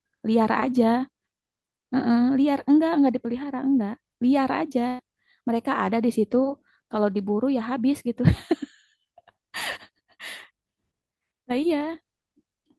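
At 4.87 s the speech hits a burst of packet loss lasting to 5.01 s: packets never arrived in time, so the receiver filled about 115 ms by extending the last sound and fading it out. Speech then resumes with roughly 120 ms skipped.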